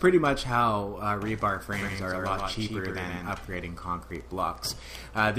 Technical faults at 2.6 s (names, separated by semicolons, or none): doubled audio track